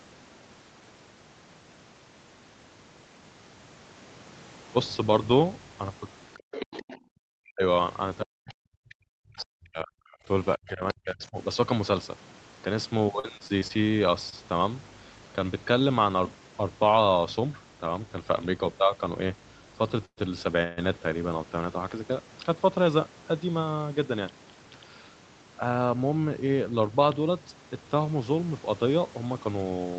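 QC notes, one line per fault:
6.34–6.98 s and 9.39 s, other side's voice leaking through. A second voice is heard under the speech, at about 10 dB below it in the first stretch and much fainter, about 25 dB down, in the brief scrap at 9.39 s. The likely cause is loudspeaker playback reaching the microphone and not fully removed by the echo canceller.
6.39–6.52 s and 6.98–7.14 s, background gated by the echo canceller. The room sound drops away twice, each time for roughly 150 ms, by about 40 dB and about 38 dB at the deepest. The canceller clamped the microphone while the loudspeaker was active. The background then snaps back when it releases. The result is a pair of brief holes in the ambience around the leaked voice.
7.42–7.63 s, 8.22–10.3 s and 10.56–11.37 s, speech suppressed in double talk. The talker's speech dips hard, down by about 35 to 40 dB at worst. It lasts about 0.2 s, then about 2 s, then about 0.7 s. 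Words fade, lose their top end or break into pieces. The likely cause is both sides speaking at once, so the canceller could not tell the talker from the echo and turned everything down.
13.19–13.84 s, repeated packet loss (robotic sound). Six short holes fall within this stretch, the longest about 39 ms. About a fifth of the span is patched audio. Each gap is filled by stretching the last sound before the next one hits. That gives a choppy texture with fragments of speech missing, about 80 ms in total.
14.30 s, short concealed packet loss. About 20 ms of audio never arrived. The receiver bridged it with roughly 25 ms of continued sound, then blended back. It is heard as a brief smear or wobble in the speech. A small piece of sound may be gone.
20.05–20.19 s and 20.63–20.79 s, call audio freeze. The audio stalls twice, for about 0.12 s and 0.14 s. In the first stall the held sound decays into about 70 ms of silence. 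In the second it is bridged by continued sound without going silent. Nothing is lost. Playback simply resumes late each time. The likely cause is packets held up in transit, emptying the jitter buffer.
29.10 s to the end, jitter buffer speed-up. The final stretch runs at about 112% speed with the pitch unchanged. Roughly 100 ms is trimmed out in small pitch-period pieces to shrink an overfilled buffer. The speech sounds hurried.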